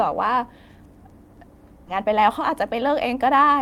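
At 1.87 to 1.89 s, a skip ahead occurs. Roughly 0.7 s of speech is dropped with no fill. The two sides join almost directly. From 1.97 to 3.57 s, a jitter buffer speed-up follows. Pitch-period slices totalling about a tenth of a second are removed. The speech runs 6% fast at unchanged pitch and sounds slightly hurried.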